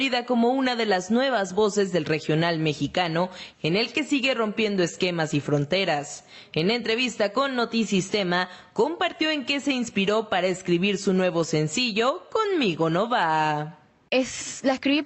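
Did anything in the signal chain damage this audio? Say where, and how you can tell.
Yes. Gain pumping runs through the whole clip, with the gain swinging by roughly 10 dB. The likely cause is input gain set far too high, with a fast limiter pulling it back down. On the waveform, the envelope is flattened, and the noise floor bulges between peaks.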